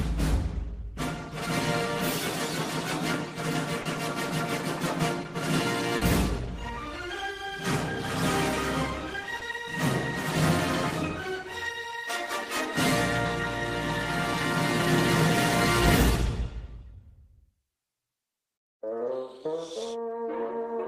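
Short concealed packet loss occurs three times, at 3.81 s, 5.97 s and 9.39 s. At each point a short stretch of audio, about 40 ms at the first two and about 20 ms at the third, failed to arrive in time. The receiver covered each gap by extending the preceding sound, either continuing its pitch or substituting shaped noise, before blending back into the real signal. Each gap is heard as a brief smear or wobble.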